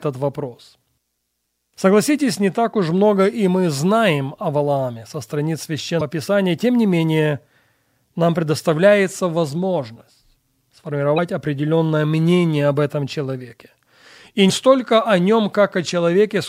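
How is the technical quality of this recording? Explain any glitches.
Three short blips break up this speech recording, each one damaged data in a compressed stream. They sit at 5.97–6.02 s, right after "со страниц"; at 11.14–11.19 s, just before "определенное мнение об этом"; and at 14.46–14.51 s, just before "столько о". Each is a brief glitch of about 44 ms. Corrupted bytes there made the decoder misread frames and lose sync until it found the next valid frame header.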